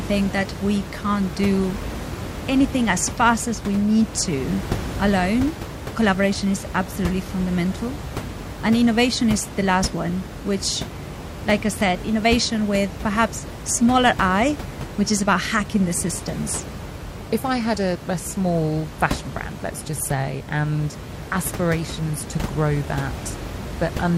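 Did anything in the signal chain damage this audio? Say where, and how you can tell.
No, nothing damaged this audio.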